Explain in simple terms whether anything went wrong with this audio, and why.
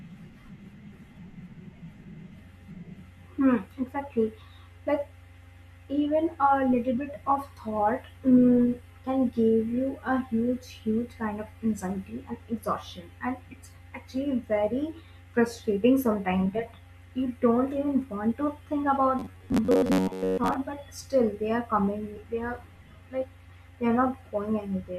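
From 19.19 to 20.55 s the speech becomes a fixed 94 Hz metallic buzz. This is robotic sound from repeated short buffers, likely an 11 ms snippet looping. Unlike dropouts, it never falls silent.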